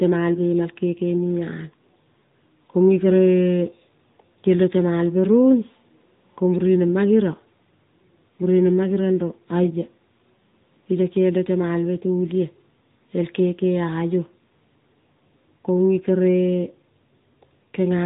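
AMR narrowband mobile codec damage runs through the whole recording, from the first second to the last. The speech has been squeezed into a 2G/3G-style phone channel: everything above about 3.8 kHz is gone, so consonants lose their crispness. Each 20 ms frame is rebuilt from a vocal-tract model and a handful of pulses, which gives the voice a plainly audible buzzy, synthetic edge. That degree of coding fits a mid-range rate near 10.2 kbps.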